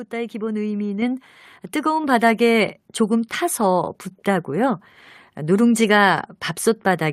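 At 1.02 s the whole signal, speech and background alike, jumps up by about 5 dB in a single step, then again by about 3 dB at 2.04 s. This is a microphone volume stepped up: the call software judged the input too quiet and raised the device's input gain abruptly.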